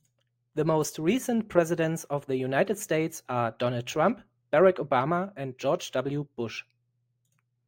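Speech, with imaging from linear upsampling throughout. The top of the band sounds dulled. A faint mirrored copy of the spectrum, roughly 30 dB down, fills 11 to 22 kHz and adds a light metallic shimmer to sibilants. The rate appears to have been raised from about 22 kHz to 44.1 kHz by straight-line interpolation.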